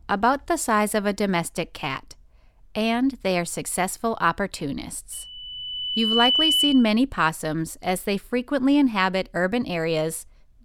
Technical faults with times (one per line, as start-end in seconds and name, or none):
5.12-6.93 loudspeaker feedback squeal